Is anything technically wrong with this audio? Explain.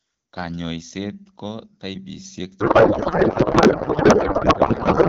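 Yes. From 2.59 s to the end, there is a codec payload misread. The AMR wideband frames were sent octet-aligned but unpacked as bandwidth-efficient, so every field lands in the wrong bit positions. The speech gives way to garbled noise and warble that barely tracks it. Before that point the HD Voice audio is clear, with only light coding damage consistent with a rate around 12.65 kbit/s.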